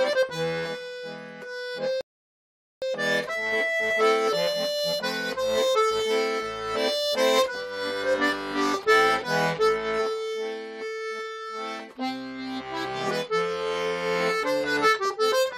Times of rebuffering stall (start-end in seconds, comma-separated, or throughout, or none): 2.01-2.82